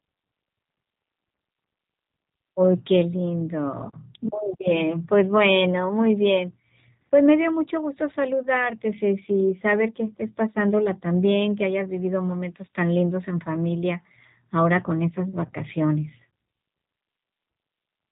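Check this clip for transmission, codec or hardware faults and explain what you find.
The clip has one fault, present from start to finish: G.729 codec coding. The speech is rebuilt from a vocal-tract filter, pitch predictor and sparse pulses, and the sound fits an 8 kbit/s rate. It is plainly rough and synthetic, with nothing above 3.8 kHz. A spectrogram shows a flat ceiling there and smeared, buzzy harmonics below.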